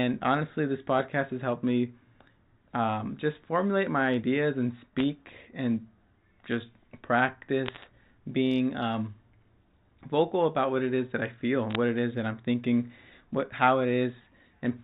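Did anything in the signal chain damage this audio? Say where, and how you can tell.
Yes. Bit errors on a digital phone line damaged the transmission stage, in three short bursts: 4.99 to 5.03 s, 7.66 to 7.84 s, and 11.71 to 11.75 s. Each burst is a cluster of sharp ticks and crackle riding on speech that keeps its level and band-limited telephone tone below 4 kHz. Because G.711 stores each sample as one logarithmic byte, a flipped sign or high-order bit throws single samples far off, producing clicks. The density suggests an error rate of a fraction of a percent.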